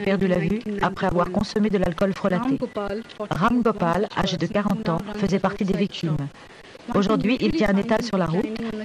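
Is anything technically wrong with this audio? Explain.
No, nothing is technically wrong with this audio.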